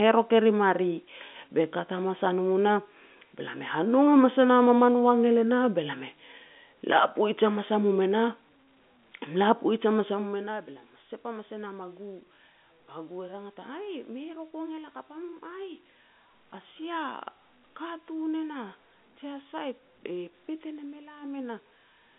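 Speech clip with no technical faults heard.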